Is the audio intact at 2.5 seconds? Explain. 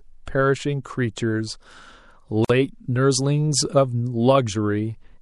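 No. A gap at a join of encoded pieces cuts the speech from 2.44 to 2.50 s, a silence of about 50 ms. Separately encoded segments were joined untrimmed, so encoder start delay and last-frame padding remain, leaving an abrupt dropout with smeared edges before speech resumes where it stopped.

Across that moment the speech also sounds watery, with swirly, metallic sibilants. This is likely MP3 compression, with the damage pointing to a bitrate around 64 kbps, where weak frequency lines flicker on and off between frames.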